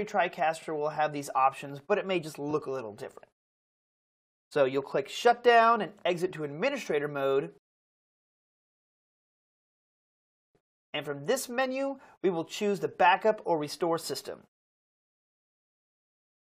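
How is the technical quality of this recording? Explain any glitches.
Two short stutters mar the recording, both from repeated frames. At 0.62 s a 46.4 ms slice plays twice, which fits two compressed frames, and at 2.50 s a 23.2 ms slice repeats, likely one frame. The decoder received those frames again and replayed them, lengthening the audio by the repeated time.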